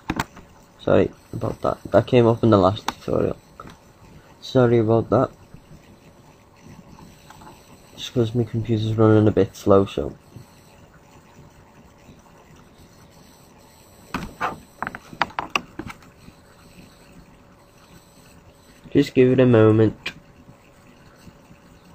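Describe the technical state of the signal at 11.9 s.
At 11.9 s the signal is intact, with no audible technical fault at that moment.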